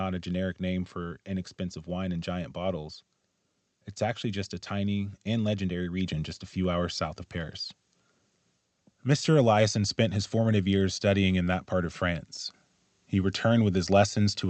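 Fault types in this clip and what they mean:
Microphone volume stepped up: at 6.06 s the speech and the background noise behind it jump louder together by about 5 dB in a single step. This is what happens when the call software judges the microphone too quiet and raises the device's input volume.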